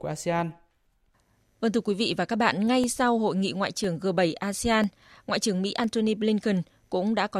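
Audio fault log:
0.85 to 6.84 s, periodic USB or driver dropouts: about a millisecond of speech drops to silence every 1.0 s. Each gap sounds like a regular tick.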